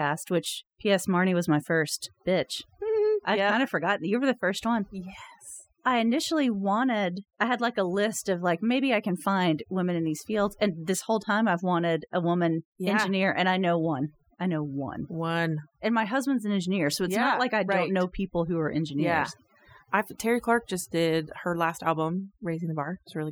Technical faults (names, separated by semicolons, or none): overdone noise removal